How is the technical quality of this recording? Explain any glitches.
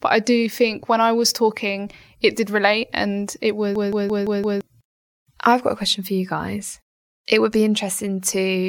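One glitch stands out. System hang loop, 3.76 to 4.61 s, just after "did relate and it": the driver froze while hardware replayed one 171 ms buffer, consistent with 8192 samples, five times at 5.86 Hz. It sounds like a machine-gun stutter, and about a second of speech is lost.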